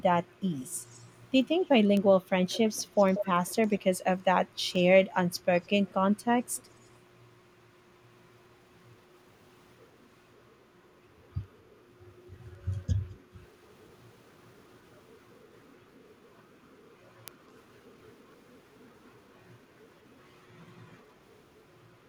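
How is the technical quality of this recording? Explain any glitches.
The recording has one recurring fault in its first seven seconds.

Echo leak appears at 0.61 to 1.13 s, 1.61 to 1.66 s, 2.49 to 3.81 s, 4.71 to 4.83 s and 5.61 to 6.9 s. The likely cause is a far end playing the call on a loudspeaker, with its echo canceller letting part of the returned speech through. A faint copy trails the voice by about 186 to 193 ms, drifting slightly later each time. It is mostly very quiet, but from 2.49 to 3.81 s it rises to a clearly audible level.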